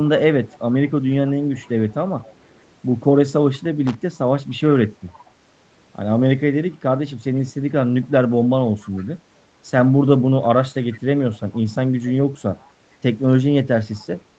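At 3.87 s a short burst of loose connector crackle runs for about 90 ms, ending at 3.96 s. A worn or dirty contact is making and breaking as it shifts, chopping the signal into an irregular scratch. Unlike codec or packet-loss glitches, which sound tonal or like repeated fragments, this is ragged broadband noise with no pitched content. The call path limits the audio to 8 kHz.

From 5.10 to 5.23 s a faint copy of the speech surfaces, trailing the original by 456 ms and sitting around 30 dB below it. This is an echo leak, most likely from a far end on a loudspeaker whose echo canceller let part of the returned voice slip through. The long, fixed lag of almost half a second separates it from room reverberation, which blends continuously into the sound rather than repeating it as a distinct delayed fragment.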